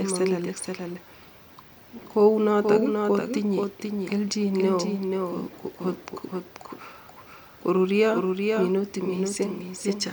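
A doubled audio track runs through the whole speech clip: a second, full-band copy trails the original by about half a second, a few dB quieter, with no decay or room colour. This is likely a second capture via a slower path.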